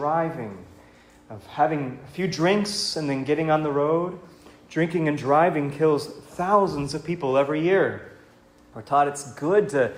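Listening through the recording, nothing stood out as a technical problem at any point.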